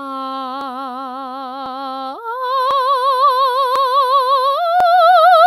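The music has overlapping chunks, with a stutter at 0.61, 1.66, 2.71, 3.76 and 4.80 s. Each 1-second chunk starts about 48 ms before the previous one ended, so that sliver plays twice at every join, giving a regular hiccup roughly once a second.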